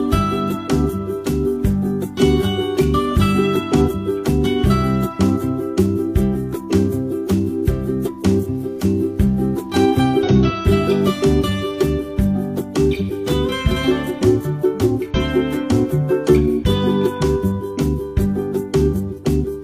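At 3.81 to 3.84 s, 10.22 to 10.28 s, 12.96 to 13.01 s, 15.10 to 15.14 s and 19.14 to 19.20 s there are brief bursts of damaged data in the compressed stream, each between 30 and 60 ms long. Corrupted bytes make the decoder misread or reject those frames and lose sync until it finds a valid frame header, so each spot comes through as a short chirp, squawk, click or hole cutting across the audio.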